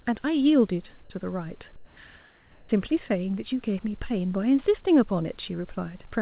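From 1.76 to 1.97 s and 2.21 to 2.69 s, the background goes flat and featureless, about 4 dB then about 1 dB quieter: likely comfort noise standing in for the background.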